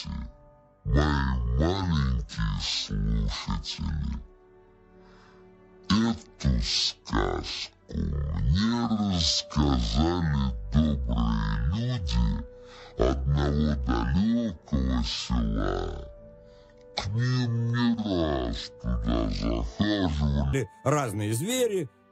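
From 0.0 to 20.53 s everything plays at half speed and an octave low: stereo read as mono, with interleaved left and right samples run together as one channel.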